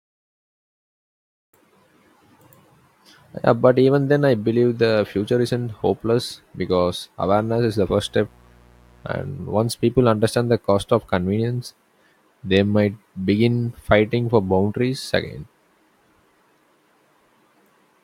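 From 7.21 to 9.29 s, right after "future isn't hopeless because" and ending before "once people understand the", a mains buzz creeps in under the speech. It's a 60 Hz raspy drone with harmonics reaching into the kHz range, sitting roughly 30 dB below the voice. The cause is sharp switching spikes leaking in from the power line.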